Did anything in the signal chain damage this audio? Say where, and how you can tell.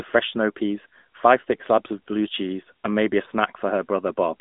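Yes. The damage sits at the codec stage and runs through the whole clip: an AMR narrowband mobile codec. Nothing above about 3.8 kHz survives, and the band is squeezed to roughly 200 Hz to 3.7 kHz. The speech has a plainly audible buzzy, synthetic edge. That points to AMR-NB at a mid rate, around 10.2 kbps. The codec rebuilds speech from a vocal-tract model and sparse pulses, so fine detail is lost.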